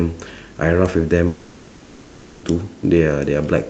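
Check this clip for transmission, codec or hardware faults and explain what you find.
One fault: from 1.27 to 2.46 s the speech drops out, likely a long network dropout. The receiver fills the 1.16 s gap with a fading buzz or hiss, and that stretch of speech never returns. Over the call path, the speech is band-limited to about 8 kHz.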